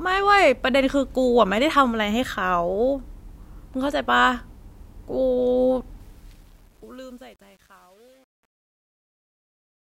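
Truncation distortion on a fade runs from 6.00 s to 10.00 s in this speech clip, worst from 6.53 s. As the fade-out lowers the level, the volume stage keeps too few bits and adds no dither, which fits about 9-bit resolution, so the quiet tail turns gritty.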